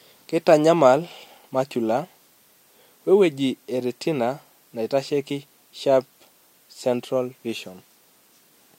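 No technical faults can be heard at any point, so there is nothing to describe in time order.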